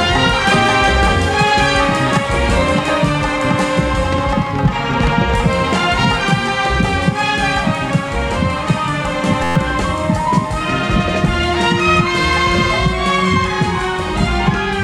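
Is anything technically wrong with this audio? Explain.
Yes. A system hang loop runs from 9.44 to 9.56 s: the system froze while the hardware kept replaying one 11.6 ms slice, which fits a 512-sample buffer. Ten exact repeats make a steady 86 Hz buzz, and about a tenth of a second of audio is lost.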